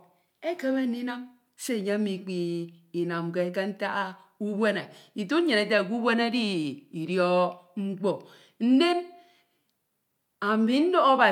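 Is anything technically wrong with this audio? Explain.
No, nothing technically wrong turns up anywhere in this speech recording.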